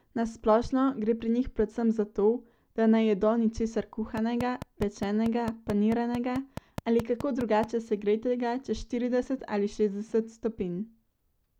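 A regular ticking runs over the speech from 4.17 to 7.65 s, between "da ne jedo ničesar" and "segretega čez štirideset": a train of clicks, about fifteen evenly spaced pops at 4.6 per second, standing roughly 10 dB above the voice. Likely interference from nearby equipment or a faulty connection or power supply.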